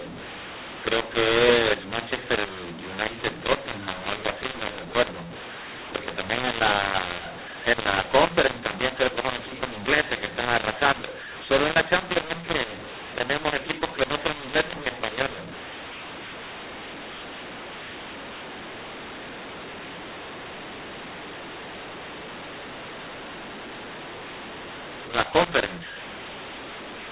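Speech coded with G.711 mu-law has been decoded as A-law, mixing up mu-law and A-law throughout. The mismatched companding curves scramble sample levels, some too large, others too small. The sound is harsh and distorted, and quiet stretches fill with noise instead of silence.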